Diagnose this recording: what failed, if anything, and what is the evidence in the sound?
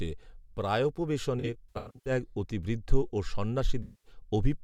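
AAC frame loss with concealment at the codec stage: smeared, noisy patches from 1.39 to 2.11 s, where about 360 ms of speech went missing in runs of up to roughly a tenth of a second, and from 3.82 to 4.12 s, about 210 ms. The decoder filled those gaps by re-synthesising the last good spectrum.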